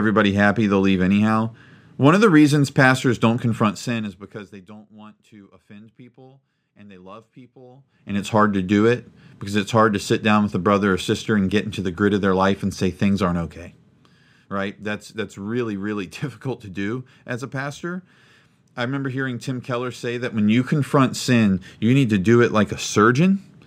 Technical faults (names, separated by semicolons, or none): zipper noise